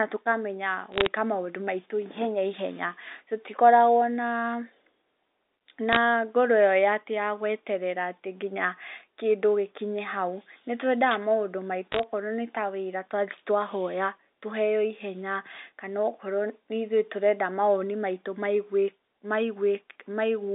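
Sharp ticks and brief crackle sit over telephone-band speech at 0.92 to 1.06 s, 5.93 to 5.96 s and 11.92 to 12.03 s. These are bit errors on a digital phone line: a few flipped bits in the G.711 samples, heaviest in the last burst, each jolting a single sample.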